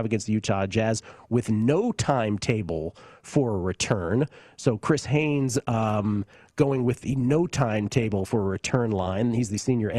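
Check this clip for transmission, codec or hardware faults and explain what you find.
One transmission fault is present. From 5.15 s to the end, the adaptive stream drops to a lower bitrate. The connection slowed, so the player switched to a leaner encoding, which fits a fall from about 64 to 24 kbit/s. The speech has more codec artefacts. The change is abrupt, with no gap.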